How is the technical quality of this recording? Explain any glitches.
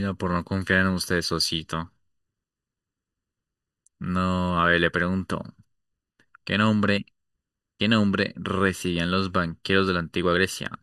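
There's one problem, and it runs the whole way through: channel delay causing comb filtering. One channel lags the other by about 0.7 ms, and summed to mono, the shared speech cancels at evenly spaced frequencies starting around 700 Hz. That gives the voice a hollow, phasey, slightly boxy colour.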